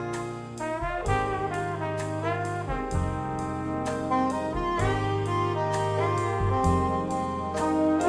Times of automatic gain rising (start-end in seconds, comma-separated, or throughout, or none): none